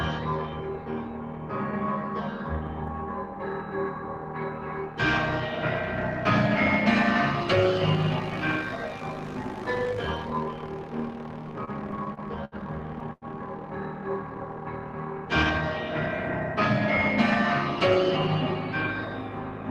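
From start to finish, a noise suppressor applied to music or sounds keeps treating sustained tones, ambience and reverb tails as noise and pulling them down by around 5 dB. Attacks survive while held material sinks, so the level pumps and thins. A spectrogram shows energy collapsing between onsets.

Between 11.51 and 12.55 s, repeated stalls (stutter) set in: seven times the jitter buffer ran dry and the last sound was extended, about 165 ms in total, the longest hold 71 ms. The audio drags and hiccups, and the waveform shows repeated, smeared copies.

From 13.13 to 13.25 s, a short stall from a late packet holds one sound for about 89 ms before playback resumes where it left off. It sounds like a brief freeze with a slight buzz or dip, visible as a flat, stretched band on the spectrogram.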